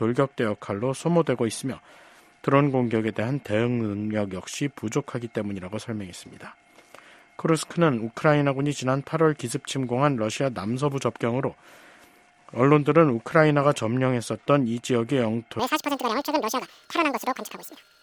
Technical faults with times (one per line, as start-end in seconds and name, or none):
15.59-18.03 audio read two samples at a time (double speed)